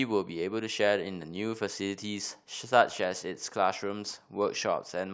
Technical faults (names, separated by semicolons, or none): none